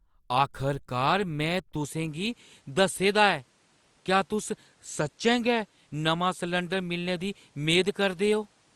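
A speech recording that, at 1.75 s, turns duller and stays that way to the end: from that point nothing above 11.4 kHz remains, the tone shifts, and a new, faint background noise appears, far below the voice, while the loudness holds steady. That points to a likely input switched to a poorer device rather than a filter or codec cutback, because the top end, the character and the noise floor all change together at one instant, with no silence at the switch.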